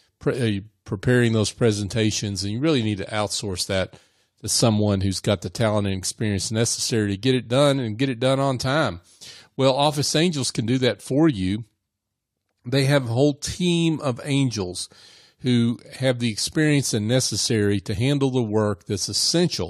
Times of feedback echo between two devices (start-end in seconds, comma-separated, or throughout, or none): none